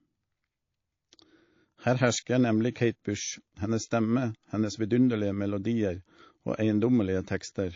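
Throughout the speech, the sound has a watery, swirling quality, with sibilants turning metallic and chirpy. These are the marks of MP3 compression, likely at a low rate that fits about 32 kbps, where the encoder starves weak frequency lines.

Just after "hersker nemlig", from 2.73 to 2.76 s, a pre-echo appears. A hiss, about 11 dB above the surrounding floor, precedes an attack by 30 ms, and the onset sounds smeared. This fits a long transform block of about 72 ms without block switching, which spreads quantisation noise ahead of the transient.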